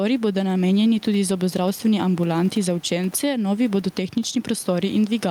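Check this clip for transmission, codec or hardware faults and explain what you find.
There is one fault, gain pumping, present throughout the clip. The likely cause is input gain set far too high for the microphone, with a fast limiter or compressor clamping down each time the speech gets loud. The level swings by around 10 dB, and the room noise sits about 32 dB below the speech, leaving the speech squashed and breathing.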